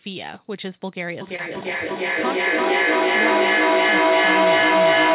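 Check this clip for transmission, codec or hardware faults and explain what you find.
Two faults are present: a feedback howl and a short concealed packet loss.

From 1.21 s to the end, a feedback howl builds. A microphone-to-loudspeaker loop gains level every pass, settling near 700 Hz, pulsing roughly every 0.3 s, peaking about 11 dB above the speech.

At 1.36 to 1.40 s, a short concealed packet loss occurs. About 20 ms never arrived, and the receiver filled 21 ms by extending the previous sound. It is heard as a brief smear.

The call path's narrow band, with nothing above 4 kHz, fits a G.711 codec.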